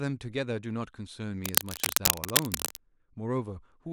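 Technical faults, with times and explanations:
1.43 to 2.77 s, cable scratch noise: for about 1.3 seconds a dense, irregular crackling rides over the speech, somewhat louder than the speech itself. This is likely a worn cable or connector being moved, its contact resistance jumping about and injecting ragged noise bursts. On a spectrogram it shows as broadband, vertically streaked smears across the band. The waveform shows uneven clusters of sharp spikes thickening the trace throughout that stretch.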